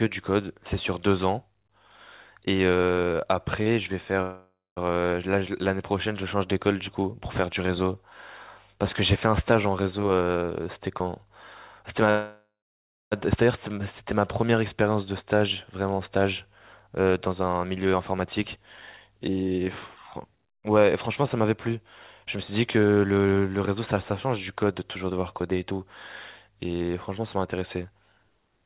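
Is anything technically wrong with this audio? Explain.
Yes. The speech has stalls, freezes and speed-ups typical of a call over a congested network. The band stops at 4 kHz, which fits a narrowband G.711 call codec.

At 3.62 s there is a short stall from a late packet. The jitter buffer briefly ran dry. The receiver stretched the last sound by 38 ms until the packet came. Nothing is lost, but one sound is held slightly too long.

Two call audio freezes occur, from 4.22 to 4.78 s and from 12.10 to 13.13 s. Packets were likely held up in transit. The last sound continues as a fading buzz, then silence: 0.2 s in the first and 0.6 s in the second. The speech then resumes where it stopped. This inserts gaps of 547 ms and 1012 ms.

Jitter buffer speed-up follows, from 10.07 to 11.08 s at 112 percent, from 16.26 to 25.79 s at 108 percent, and from 26.50 to 28.61 s at 108 percent. The receiver trimmed surplus buffered audio by cutting out tiny pitch-period slices. 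About 150 ms, 700 ms and 200 ms go. The speech sounds hurried at unchanged pitch.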